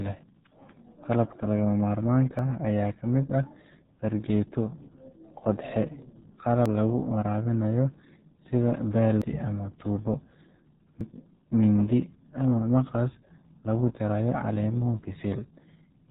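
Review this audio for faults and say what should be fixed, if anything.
The speech has been through the RealAudio 14.4 codec for its whole length. Nothing above about 4 kHz survives, so consonants lose their edge and the voice sounds muffled and boxy. The heavy coding adds a gargly, watery texture to vowels. That band limit and texture fit an 8 kbit/s RealAudio 1 stream, which achieves its rate by discarding most of the spectrum and modelling the remainder coarsely. To fix this, re-encode from the original recording with a modern codec at an adequate bitrate rather than transcoding this copy.

At 2.39, 6.66, 9.22 and 11.01 s the sound jumps abruptly forward, with no gap of silence. Each time, roughly a tenth of a second of audio is missing and the two sides are butted together. This is likely a dropped buffer (overrun): the recording software failed to collect a block of samples before the hardware overwrote it, so that block was lost and the stream continued from the next one. 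To prevent this, increase the capture buffer size and keep the recording process free of competing load so it always reads the device in time.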